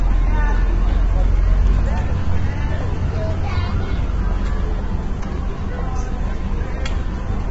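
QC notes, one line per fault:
Throughout, low-delay AAC compression: the sound is heavily degraded, rough and grainy, with a noisy fill where tonal detail should be clean, and nothing above 7.7 kHz. The likely cause is AAC-ELD, whose short frames resolve fine frequency structure poorly. The graininess points to a very low rate, around 16 kbps.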